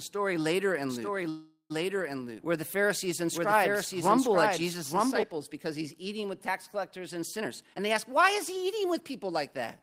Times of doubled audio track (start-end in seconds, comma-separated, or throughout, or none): 0.89-5.23